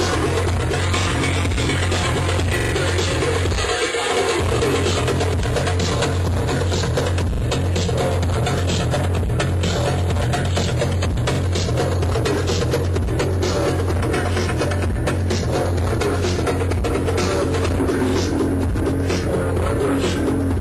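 At 1.02, 2.60, 7.34, 11.35 and 18.09 s a repeated buffer stutters. A 43 ms slice, fitting a 2048-sample buffer, replays once, three times at 2.60 s and twice at 7.34 s, because audio arrived late. Waveforms show identical blocks, and spectrograms show vertical seams.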